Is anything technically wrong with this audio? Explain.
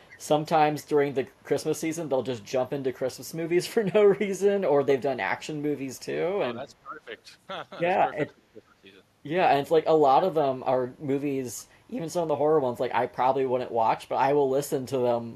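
Yes, the speech has two faults, both probably from a speakerphone's echo canceller.

Echo leak occurs at 0.08 to 0.17 s, 8.27 to 8.31 s and 11.58 to 11.63 s. Each time a faint, delayed copy of the speech, about 450 ms late, slips through, well below the main level (roughly 25 to 40 dB down, fading with each occurrence). The likely cause is a canceller failing to fully subtract its loudspeaker's output from its microphone. It differs from room reverberation because it is a distinct late repeat, not a smooth decaying tail.

Speech suppressed in double talk occurs at 6.64 to 7.11 s, 8.31 to 8.85 s and 11.71 to 11.78 s. The speech level dips there, by up to roughly 15, 20 and 10 dB respectively. Each dip likely comes from the canceller mistaking overlapping talk for echo and attenuating everything. Unlike a network dropout, the last two dips fall right beside echo bursts.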